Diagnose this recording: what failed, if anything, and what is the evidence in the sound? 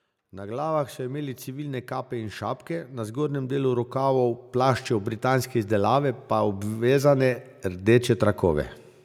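The automatic gain control in the call processing stage judged the input too quiet and kept pushing its gain upward, producing automatic gain rising across nearly the whole recording. From 0.17 s to 8.73 s the level climbs steadily by about 18 dB, and because the gain acts on the entire signal, the speech and the background noise floor swell together rather than the speech alone getting louder.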